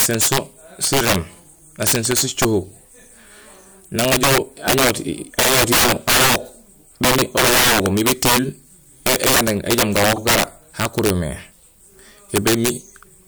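Integer overflow runs through the whole speech clip. The signal is driven about 15 dB past the integer limit, so around one sample in twenty exceeds full scale. Instead of being held at the limit, each of those samples wraps to the opposite sign. Loud syllables therefore break into violent, splintering cracks. Clipping would flatten the peaks into a buzzy distortion; this is far harsher.

Repeated frames occur at 5.42–5.47 s, where a 52 ms block plays twice, and at 10.15–10.18 s, where a 26 ms block plays twice. This fits two compressed frames and then one. Each is a brief stutter that lengthens the audio rather than leaving a gap, which separates it from a dropout.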